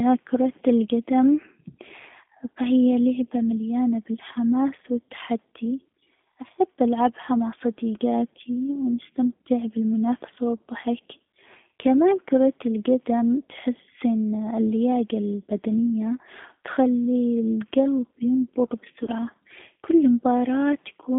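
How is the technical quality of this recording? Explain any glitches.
The recording has low-bandwidth codec quality with two brief dropouts. Throughout, the speech passes through a G.729 codec at 8 kbit/s. The band runs from 150 Hz to 3.5 kHz. Modelled pulses make the speech sound plainly rough and synthetic.

VoIP packet loss concealed by the speech codec occurs at 7.21 to 7.24 s and at 19.04 to 19.11 s. The decoder guesses about 10 ms and then 30 ms of missing audio, which fits one and three lost frames. Each gap becomes a short, fading buzzy tone or coloured noise, and the speech stays weak just afterwards.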